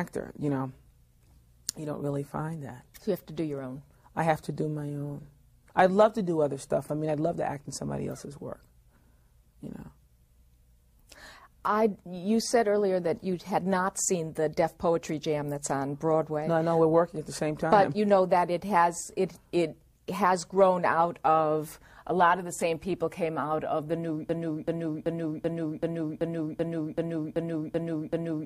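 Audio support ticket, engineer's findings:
Same 0.38 s fragment repeats back to back, 11 times, from 24.29 s to end. Broken-record loop: stalled player or stream likely resending its last fragment. Remaining audio lost.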